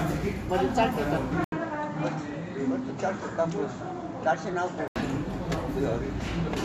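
At 1.44 s an 80 ms gap, then until 4.96 s the sound dulls, slightly quieter, likely an input switched to a poorer device.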